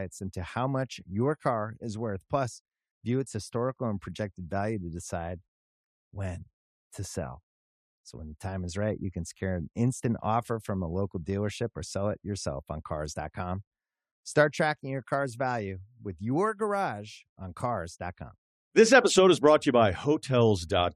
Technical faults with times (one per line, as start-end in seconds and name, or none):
none